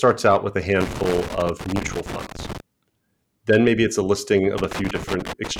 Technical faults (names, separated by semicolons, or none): loose connector crackle